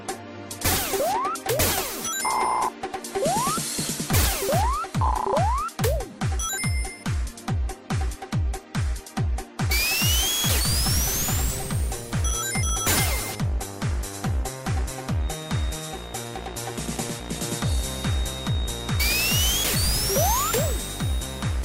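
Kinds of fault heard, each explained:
Feedback whistle: from 15.15 s to the end, a thin, steady whistle near 3.7 kHz sits behind the sound, roughly 20 dB below it and swelling and fading slowly in level, likely from a loudspeaker-to-microphone loop poised at the edge of feedback, sustaining one tone.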